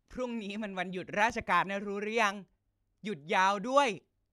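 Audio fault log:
1.30–1.44 s, loud pop: two sharp pops in quick succession jump out over the speech, peaking at about 5 dB above the surrounding level, while the talking carries on underneath without a break. This is likely an electrical transient, such as a switch, plug contact, static discharge or driver glitch, adding a sudden voltage pulse to the signal. The following circuitry turns each pulse into a brief thump.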